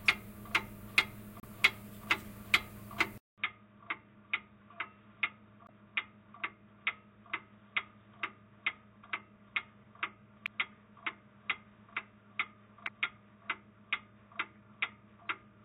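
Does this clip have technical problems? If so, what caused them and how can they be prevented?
Yes. Brief glitches, heard as a chirp, squawk, click or short hole, occur at 1.40–1.44 s, 5.66–5.70 s, 10.44–10.47 s and 12.84–12.89 s. This is damaged data in a compressed stream: corrupted bytes make the decoder misread frames and lose sync. Storing and transferring files with checksums and error-checked connections prevents this.

At 3.18 s a 200 ms silence is followed by duller or boxier sound about 5 dB quieter, with new background noise about 45 dB down. The likely cause is the input switched to a poorer device with narrower bandwidth. Locking the recording input to one device, and disabling automatic switching, prevents this.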